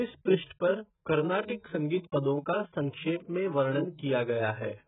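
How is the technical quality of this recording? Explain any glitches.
Quality's poor, held back by one problem running the whole way through. The speech sounds dull and smeared from start to finish, with a warbly, fizzy texture on sustained sounds and sibilants, and nothing above 3.8 kHz. That's likely AAC compression, AAC-LC at a very low bitrate, something like 8 kbps. The encoder drops the top end and coarsely quantises the remaining frequency bands, leaving gaps and swirling artefacts.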